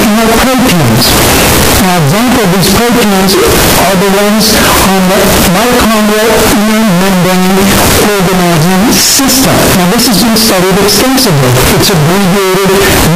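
From start to finish, 16-bit samples were likely read with signed and unsigned mixed up, flipping the top bit so every zero crossing leaps across the full range. The result is extremely loud, harsh distortion, with quiet passages blasting as hard as the loudest ones.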